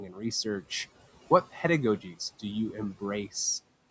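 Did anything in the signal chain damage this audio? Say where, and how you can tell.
Yes. Noise suppressor artifacts run through the whole clip, introduced at the call-processing stage. The room noise, sitting about 20 dB below the speech, is pulled down by about 14 dB in the gaps between words and then rises again under the speech, so the background pumps in step with the talker. This happens because the suppressor decides band by band, frame by frame, which parts of the spectrum are steady noise.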